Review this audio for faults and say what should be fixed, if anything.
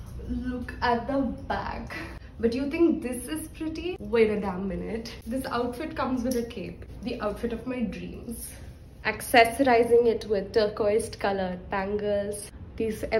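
Nothing to fix: no audible faults anywhere in the clip.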